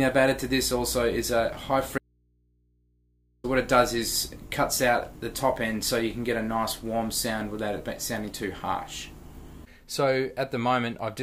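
An audio dropout to a faint residue runs from 1.98 s to 3.44 s: the sound cuts out abruptly for about 1.46 s, leaving only a low mains hum roughly 40 dB below the signal, then snaps back mid-flow. The likely cause is a brief loss of the source while the input stayed open and picked up hum. The instant edges and hum-filled gap separate this from a natural pause or a fade.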